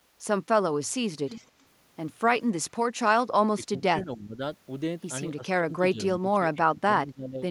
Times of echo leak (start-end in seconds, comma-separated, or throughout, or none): 1.27-1.46